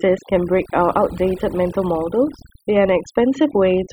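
From start to finish the recording shows overdone noise removal. A noise reduction stage was set far too aggressively, so any frequency band sitting close to its noise estimate is pulled right down or muted outright, and the quieter components of the speech are removed along with the noise. Between phrases the background drops and breaks up into twinkling specks.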